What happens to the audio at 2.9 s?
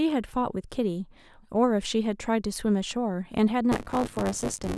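Nothing goes wrong at 2.9 s: the speech carries on intact through that moment, with no dropout, click or distortion.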